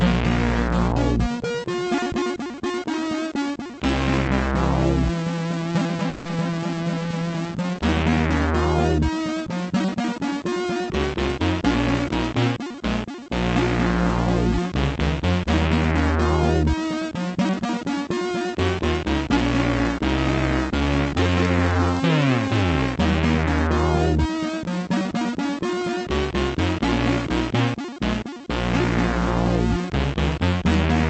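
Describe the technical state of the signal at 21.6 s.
At 21.6 s the signal is inside a jitter buffer speed-up running from 20.72 to 21.80 s. The receiver drained excess buffered audio by cutting short pitch-period segments, about 150 ms in total, so the sound plays at 112% speed with unchanged pitch and seems rushed. Through the call codec path, the audio stays band-limited near 8 kHz.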